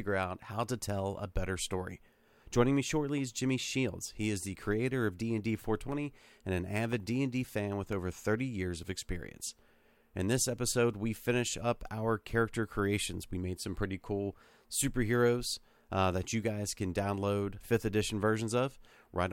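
From 5.92 to 9.92 s, periodic USB or driver dropouts occur: something stalls the audio driver or USB transfer once a second, and about a millisecond of speech is replaced by silence each time, producing roughly five evenly spaced ticks.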